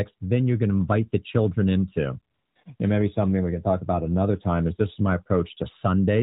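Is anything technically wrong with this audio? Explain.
Yes. Just after "invite the children into", AMR comfort noise replaces the real background from 2.34 to 2.56 s, again at 2.64 s, and from 2.76 to 2.80 s. The phone judged the line silent and stopped sending speech frames, so the receiver filled the gaps with smooth synthetic noise. It switches in and out rather than going dead, which sets it apart from a plain dropout. The narrowband AMR coding underneath is consistent with its 12.2 kbps mode.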